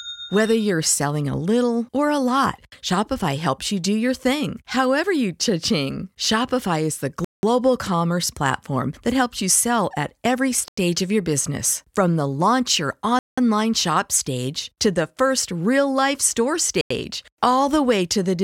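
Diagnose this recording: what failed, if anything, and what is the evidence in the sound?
The driver or buffer stage failed. Four blocks of digital silence cut the speech at 7.25–7.43 s, 10.68–10.77 s, 13.19–13.38 s and 16.81–16.90 s. The 186 ms and 93 ms holes fit 8192- and 4096-sample buffers left unfilled.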